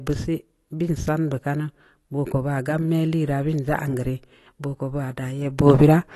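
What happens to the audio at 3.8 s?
At 3.8 s the speech sounds dull and smeared, with a fizzy, warbling edge and nothing above 12.1 kHz, as it does throughout. Likely cause: AAC compression at a low bitrate, around 32 kbps, cutting the top band and leaving spectral holes.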